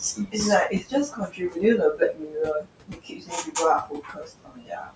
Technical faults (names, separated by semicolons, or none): noise suppressor artifacts; speech cut by the noise suppressor